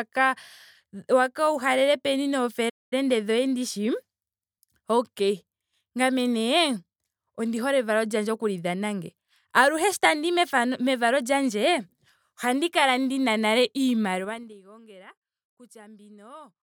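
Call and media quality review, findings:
Playback stall, 2.69–2.93 s. Output drops out for about 220 ms after "waka uhalele peni", then resumes at "dhoye ndishi". Likely cause is buffer underrun or a blocked audio thread in the player, with nothing fed to the device until recovery. Waveform shows a flat silent gap with abrupt edges. Spectrogram shows a clean vertical blank band across all frequencies.

Zipper noise, 14.15–14.57 s, just after "ohandi kala ndina nale". Gain ramps down in 2 dB steps at about 20 steps per second, a fall of around 20 dB, with no interpolation between steps. Each step clicks, giving a ticking rasp over the fade. The gain stage or volume control applies updates per block. Waveform envelope looks like a staircase, not a slope. Spectrogram shows faint evenly spaced vertical broadband lines through the fade.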